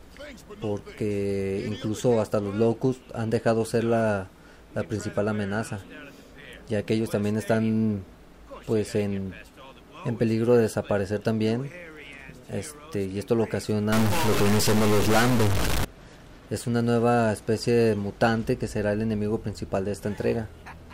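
A data bit likely stuck at a fixed value, probably from a faulty line or converter, shifts roughly half the samples by a step of around -20 dBFS from 13.92 to 15.85 s, producing harsh, buzzy stuck bit distortion and filling quieter moments with noise.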